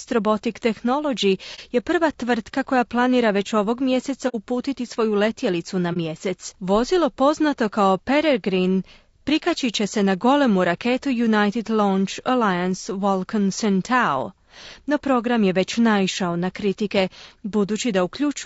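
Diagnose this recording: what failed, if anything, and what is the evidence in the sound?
The codec stage is the weak point throughout: the speech has the rough, grainy texture of low-delay AAC compression, likely AAC-ELD running at a low rate, which fits roughly 32 kbps. At this low bitrate the coarse coding leaves noise in the gaps between the voice's harmonics, and the upper band sounds thin and synthetic. The damage is plainly audible from start to finish.

The network or transport stage then dropped data, giving AAC frame loss with muting at three points. There is a gap from 1.55 to 1.59 s just before "je prva tvrtka koja", a longer one from 4.28 to 4.36 s between "koja planira već ovog" and "svoju letjelicu na", and another from 5.93 to 5.97 s right after "svoju letjelicu na". The decoder zeroed the missing spectrum, and the overlapping windows faded the sound out and back in. The single losses are brief dips and the longer one a soft-edged hole, and the 30 ms and 60 ms lengths fit one and two lost frames.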